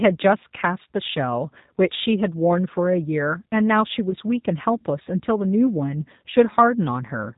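A speech recording carries G.729 codec damage from start to finish. Everything above 4 kHz is gone. The voice sounds rough and slightly synthetic, rebuilt from a vocal tract filter and a few pulses per frame. The sound points to an 8 kbit/s G.729 stream. From 4.10 to 4.14 s there is VoIP packet loss concealed by the speech codec. The gap fits a single 10 ms frame going missing. The decoder stretches its last pitch and filter into a brief buzzy tone or coloured noise that fades. The voice stays weak or distorted for tens of milliseconds or more afterwards.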